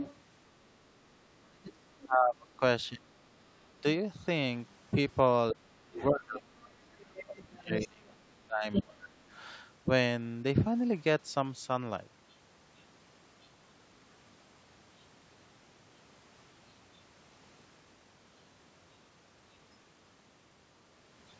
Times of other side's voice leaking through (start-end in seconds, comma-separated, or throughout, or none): 0.00-0.16, 2.01-2.56, 5.72-7.76, 8.73-8.82, 12.30-13.47